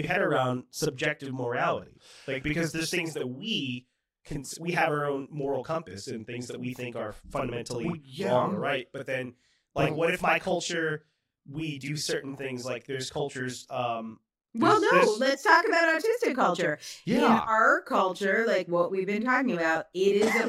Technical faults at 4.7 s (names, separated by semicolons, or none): channel delay (doubling)